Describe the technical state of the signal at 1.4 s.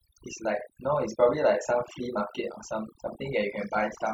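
At 1.4 s the speech shows overdone noise removal, present throughout: bands near the noise estimate are gated away, leaving a lowered background with twinkling specks; a spectrogram shows patchy, holed harmonics.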